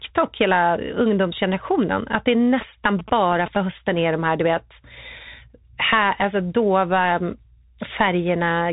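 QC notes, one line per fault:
Throughout: Bluetooth CVSD headset codec. The speech is band-limited with nothing above 3.8 kHz, consistent with a 64 kbps CVSD link. One-bit up/down coding with an adapting step leaves a granular hiss under the speech, scratchy s sounds, and slope-overload distortion on loud high content.
2.61–3.57 s: GSM signalling bursts. A galloping dit-dit-dit pattern of short buzzes at 217 Hz, roughly 15 dB below the speech, from a nearby 2G phone signalling. The audio circuit rectifies its radio bursts into the audio path.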